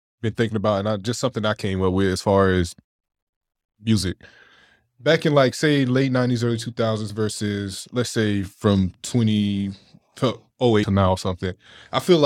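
A brief glitch cuts across the speech from 10.82 to 10.84 s, just before "to now". It is damaged data in a compressed stream: some of the data at that point in the encoded file was lost or corrupted, so the decoder could not read those frames properly. It lost sync and had to search ahead for the next valid frame header, and the garbled frame data came out as that short glitch.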